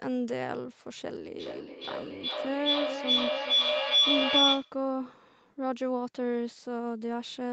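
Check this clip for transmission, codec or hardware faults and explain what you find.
One fault stands out: a feedback howl in the speech.

From 1.4 to 4.82 s, a piercing tone near 3 kHz swells, pulsing roughly every 0.4 s and peaking about 8 dB above the voice. Two devices on the same call in one room formed a microphone-to-loudspeaker loop that gained level on each pass, narrowing to that frequency until the loop broke. The audio stops at 8 kHz, as expected for a call codec at this bandwidth.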